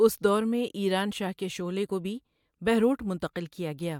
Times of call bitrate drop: none

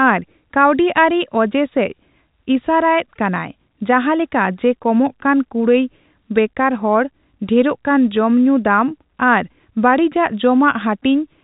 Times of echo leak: none

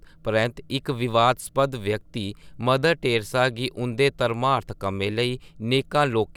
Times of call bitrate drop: none

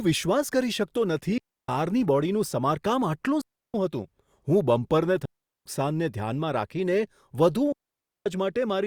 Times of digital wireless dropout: 1.38-1.69, 3.41-3.74, 5.25-5.66, 7.72-8.26

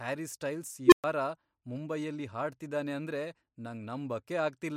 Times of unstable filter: 0.86-1.04

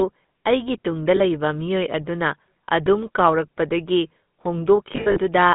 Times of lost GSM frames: 1.16-1.20, 2.66-2.69, 4.92-5.19

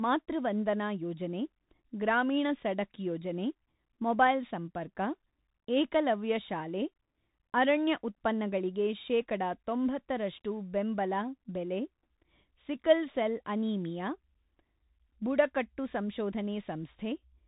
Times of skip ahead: none

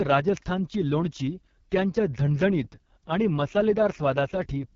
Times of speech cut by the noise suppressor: none

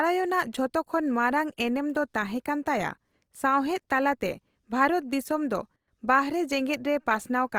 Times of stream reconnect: none

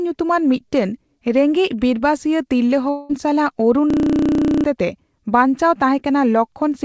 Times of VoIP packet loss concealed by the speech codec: none

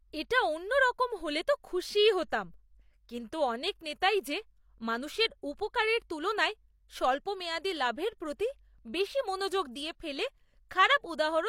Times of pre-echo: 3.79

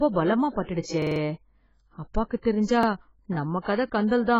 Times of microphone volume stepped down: none

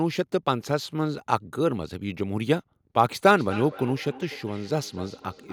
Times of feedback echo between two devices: 3.27-5.53

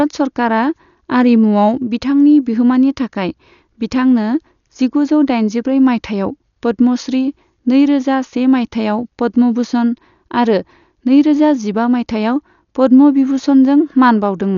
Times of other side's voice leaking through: none

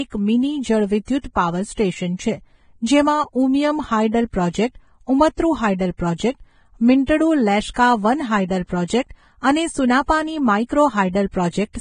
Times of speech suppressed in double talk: none

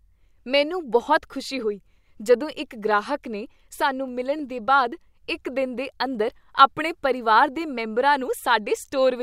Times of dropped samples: 4.08, 6.15

